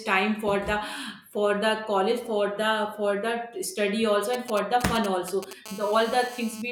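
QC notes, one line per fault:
4.34–5.53 s, GSM signalling bursts. A nearby 2G phone sends short groups of radio bursts while signalling, before any call is set up. The audio circuit rectifies each radio pulse, so the bursts turn into sound. It comes out as a galloping dit-dit-dit of short buzzes at about 217 Hz. The pattern sits at roughly 10 dB below the speech and has nothing to do with it.
5.66–6.62 s, GSM phone buzz. The phone is now in a call and transmits continuously in bursts 217 times a second. The audio circuit rectifies that steady pulse train into a hard, raspy buzz at 217 Hz. The square-edged pulses give it a dense stack of harmonics. It is nearly steady through the span, at about 18 dB below the speech, and does not follow the speech at all.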